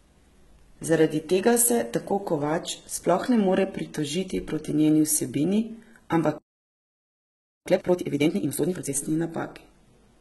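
Across the whole speech clip the treble is present but synthetic: sibilants come out gritty and lispy, and nothing sits above 11.8 kHz. This likely points to HE-AAC compression at a very low bitrate, around 16 kbps, where spectral band replication copies lower bands upward and the rebuilt harmonics fail to align.

At 6.38 s the speech cuts off mid-flow and the output stays silent until 7.66 s, a gap of about 1.28 s. This is a playback stall, likely from the player's buffer running dry or its thread being blocked.

From 7.66 s to 8.92 s the player works off the backlog with time-compressed catch-up, playing at double speed by dropping and cross-fading short segments. The speech sounds hurried but keeps its normal pitch.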